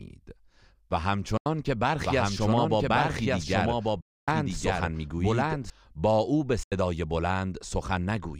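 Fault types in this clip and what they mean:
Bluetooth dropout: The speech cuts to silence three times: at 1.37 s for about 81 ms, at 4.01 s for about 264 ms, and at 6.63 s for about 81 ms. Each time it resumes further along, as though it had kept playing through the gap. The likely cause is audio packets failing to reach the headphones in time and being discarded. The longer middle gap points to a bigger run of packets lost.
Doubled audio track: From 2.04 s to 5.70 s a second full-band copy of the speech runs about a second behind the original, at roughly the same loudness. It has no decay or room colour of its own, so it sounds like a clean duplicate rather than an echo, and it switches in and out abruptly at those edges. This likely comes from the same audio being mixed in twice, captured again by a slower path or left as two misaligned copies in an edit.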